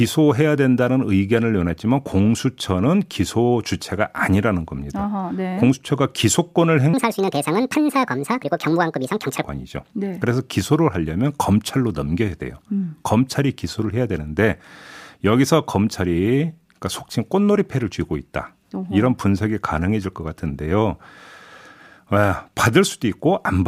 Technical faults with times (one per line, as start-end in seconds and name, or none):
6.94-9.44 section at the wrong speed